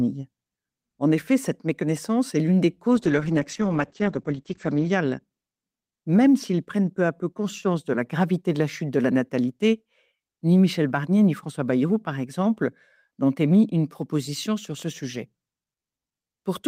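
From 2.97 to 5.27 s there is a call bitrate drop: the encoder falls back to a much lower rate, consistent with roughly 32 down to 10 kbps. Audio bandwidth narrows from 20 kHz to 8 kHz, giving a muffled, coarse sound that persists about 1.9 s at its worst.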